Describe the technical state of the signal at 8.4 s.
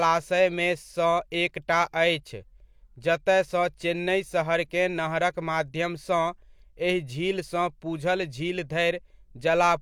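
At 8.4 s the speech signal is intact, with no dropout, clipping, glitch or other audible fault at that moment.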